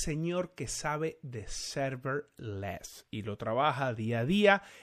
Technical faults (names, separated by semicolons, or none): MP3 compression